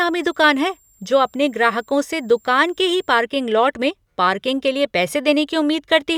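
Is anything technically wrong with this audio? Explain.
Yes. A switching supply whistle runs from 0.0 to 3.21 s and stops just before "लॉट में पार्किंग के". A power supply's switching regulator falls into an audible burst mode or beats with another supply, leaking a thin high whistle near 7.4 kHz, sitting roughly 40 dB below the speech, with its pitch between about 7.38 and 7.46 kHz.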